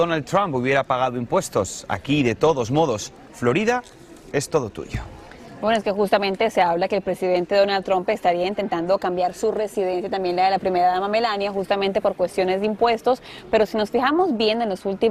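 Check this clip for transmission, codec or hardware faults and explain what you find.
There's one problem: brief hard clipping at 0.35 s, 4.55 s and 6.61 s. On those peaks the signal overshoots what the stage can pass by about 1, 2 and 1 dB, so the tops get sliced flat. That adds high harmonics, heard as tiny crackles.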